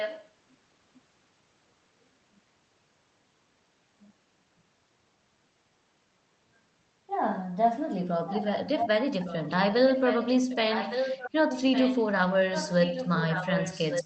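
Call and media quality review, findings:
Echo leak. Delayed copy of the speech, 1.16 s behind, at 0.0–0.3 s, 8.28–8.47 s, 8.78–8.88 s, and from 9.25 s to the end. Loud at times, only a little below the speech. Likely an incompletely cancelled far-end loudspeaker signal returned to the call.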